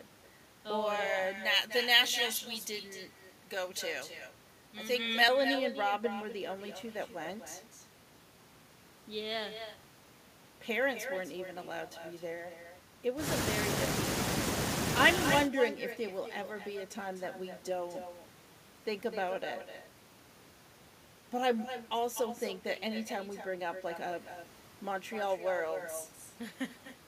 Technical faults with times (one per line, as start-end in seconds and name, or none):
0.00-27.07 echo with no canceller
1.37-5.28 pre-emphasis left on